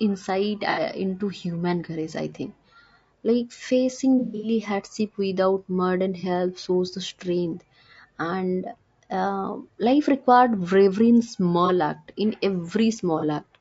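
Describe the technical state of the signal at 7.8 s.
At 7.8 s the speech carries low-delay AAC compression damage running through the whole clip: rough, grainy harmonics with noise filling the gaps between them. This is likely AAC-ELD at a low bitrate, around 32 kbps, whose short frames smear pitch detail. A spectrogram shows blurred harmonic lines and a thinned, patchy upper band.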